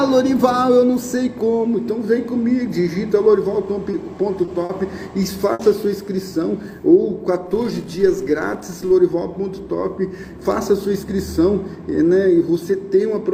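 The audio has three short concealed packet losses, at 3.91, 4.45 and 4.65 s, lasting about 20, 20 and 40 ms. Each time a bit of the stream arrived too late, and the receiver papered over the hole by extending the last sound, so you get a quick smear or wobble before it blends back in. At 5.53 s there's a burst of packet loss, with about 60 ms gone until 5.61 s. The concealment holds the sound and fades it, leaving a brief buzz or hiss, and then the audio jumps ahead with that stretch missing. From 7.46 to 8.92 s a filter restarted on every block, wiping its state each time. That gives a small transient at every block start, heard as a 375 Hz buzz that tracks the level, which fits a 128-sample block.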